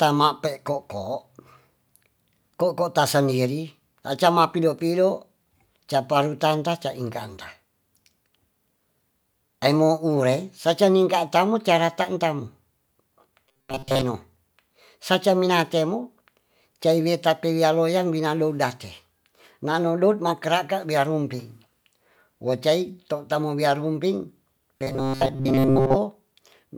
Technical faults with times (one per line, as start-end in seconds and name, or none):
13.47-14.03 robotic sound from repeated short buffers
24.79-25.96 robotic sound from repeated short buffers